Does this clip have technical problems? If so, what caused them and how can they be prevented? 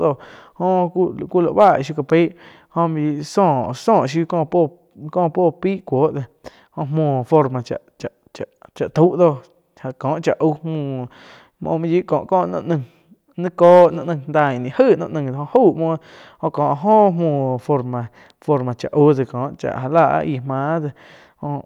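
Yes, there is brief hard clipping, heard as short crackles on speech peaks at 1.60–1.70 s, 7.34–7.38 s, 13.63–13.85 s, 14.39 s, 14.80 s, 15.55 s and 19.98–20.01 s. The level exceeded the stage's ceiling by about 0 to 3 dB, so those peaks were sliced flat. The abrupt edges give a crackly rather than the rounded, warm thickening of soft saturation. Lowering the recording gain so peaks stay a few dB below full scale would prevent it.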